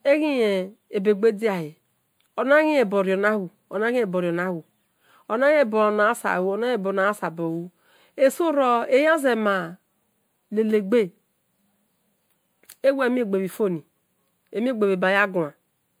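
Speech throughout, with two faults present from start to finish. The first is channel delay (comb filtering). One channel arrives slightly behind the other, by roughly a tenth of a millisecond, which fits a lag of a few samples. When the channels are summed to mono, content common to both cancels at evenly spaced frequencies. With so short an offset the first notch falls somewhere around 5 kHz, so the upper range takes on a hollow, phasey dullness that does not move over time. The second fault is a swirly, smeared quality with blurred consonant attacks and a hollow, watery texture that is worse than a single moderate-bitrate encode would produce. The likely cause is generation loss: repeated lossy decode and re-encode cycles, consistent with something like ten passes through MP3 at around 128 kbit/s. Each pass re-quantises on a shifted frame grid, so quantisation noise and spectral holes accumulate.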